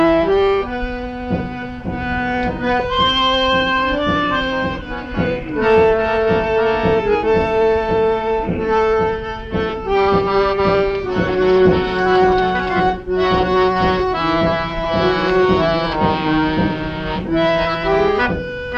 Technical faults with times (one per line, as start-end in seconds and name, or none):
none